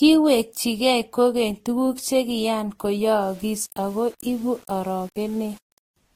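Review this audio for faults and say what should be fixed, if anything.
Transcoding between lossy codecs is the likely cause of the coarse texture heard throughout. Nothing sits above 16.6 kHz. Two layers of artefacts are audible together. The first smearing points to a low-rate Opus encode near 24 kbit/s. A Vorbis encode near 45 kbit/s then spent bits on that damage and added its own. The earlier losses cannot be recovered. Prevent this by encoding once, from the original uncompressed source.

From 3.21 s to 5.96 s, the speech turns grainy. This is low bit depth without dither. The grit tracks the voice and is worst in quiet passages. The sound likely fits rounding to about 7 bits. The error sits around 30 dB below the signal. Because it follows the signal, it is heard as distortion, not steady hiss. Prevent this by keeping full bit depth and adding dither before any reduction.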